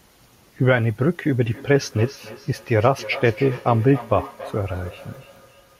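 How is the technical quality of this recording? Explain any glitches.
The recording has one clear fault. From 1.47 s to the end there is feedback echo between two devices: a second device in the room replays the sound, the microphone picks it up again, and the echo canceller doesn't remove it. Repeats arrive roughly every third of a second, peaking about 16 dB below the speech. The fixed spacing sets it apart from room reverberation, which smears continuously instead.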